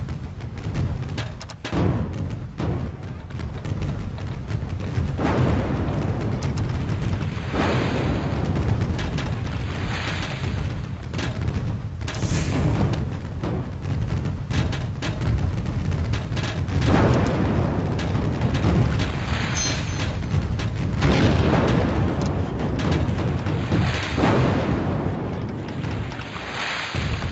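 Nothing stood out on listening; the top end stops at about 8 kHz, as expected for a call codec running at that bandwidth.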